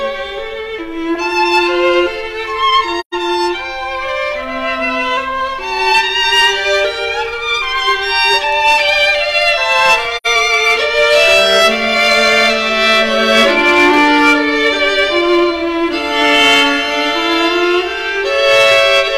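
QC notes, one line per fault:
Throughout: hard clipping. Peaks carry a crackling edge, because the signal was driven about 8 dB past what one stage could pass. Roughly 2 percent of samples were cut flat, and those flat tops add harmonics far up the spectrum.
2.99 to 3.15 s and 10.16 to 10.27 s: AAC frame loss with muting. The sound fades out and back in, leaving soft-edged holes of about 128 ms and 85 ms, which fits three and then two lost frames. The decoder zeroed those frames, and the overlapping windows smooth the edges.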